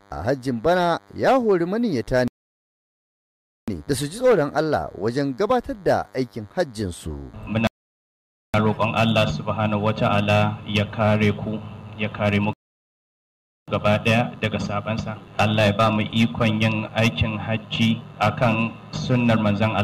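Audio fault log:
Throughout: DECT cordless phone buzz. A thin, steady buzz sits under the audio the whole way, pitched at 100 Hz but rich in harmonics, so it sounds raspy rather than like a pure hum. It stays about 35 dB below the main sound. A DECT handset or base nearby transmits a short radio burst every 10 ms, and the audio circuitry rectifies those bursts into this 100 Hz buzz.
2.28–3.68 s, 7.67–8.54 s, 12.53–13.68 s: rebuffering stall. The audio drops abruptly to silence three times, for about 1.4 s, 0.87 s and 1.14 s. Each time it picks up at exactly the point where it cut off, so no material is skipped, but the timeline stretches by the length of each gap. The player exhausted its downloaded audio and paused until more data arrived, then carried on from where it stopped.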